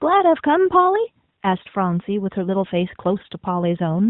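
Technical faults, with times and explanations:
No technical faults found; the speech stops at 4 kHz, as expected through a narrowband mobile codec path, and its light coding texture fits AMR-NB at its top 12.2 kbps mode.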